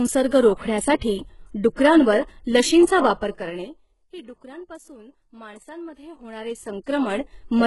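Heavy codec damage runs through the whole speech clip, most likely from HE-AAC compression at a bitrate that fits about 12 kbps. Nothing sounds above 11.4 kHz, and the treble beneath that is rebuilt from copied lower bands, so s sounds turn gritty and metallic rather than simply dulled as with a plain low-pass.

At 1.75 s comes pre-echo: a hiss spread over 28 ms leaks in just before a sharp attack, smearing its onset. It grows into the attack rather than standing apart as a separate click, because the block's noise fills the quiet gap ahead.

Zipper noise follows from 3.0 to 4.04 s, ending just before "ही डुकरांपासून". The level falls by around 20 dB in unsmoothed 3 dB steps, roughly seven a second, each leaving a small tick. It recurs from 5.92 to 7.5 s as a rise of around 20 dB, about five steps a second. The ticking follows the level change, not the sound's own texture, unlike codec warble.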